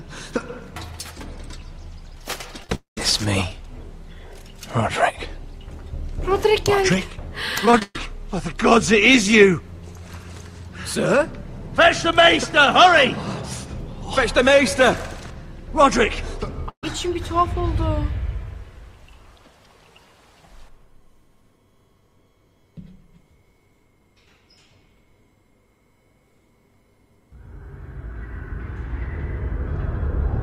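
Repeated packet loss (robotic sound) hits this audio twice. From 2.62 to 2.72 s there are four short gaps, the longest 17 ms, with about 36% of the stretch patched by extending the previous sound. From 7.66 to 7.96 s four more gaps occur, the longest 124 ms, with about 60% concealed and 180 ms lost, leaving a choppy texture. Right after the first cluster, from 2.75 to 2.98 s, the sound is held as a fading buzz or hiss and then drops to about 130 ms of silence before resuming with roughly 220 ms gone, the pattern of a likely long network dropout. A burst of packet loss at 16.70 to 16.84 s removes 130 ms. The receiver briefly continues the last sound and turns it down, leaving about 80 ms of silence before the audio picks up further on.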